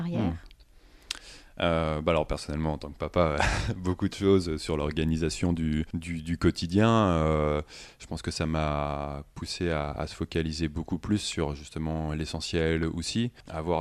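Nothing technical goes wrong anywhere in this speech recording, so there's no problem to point to at any moment.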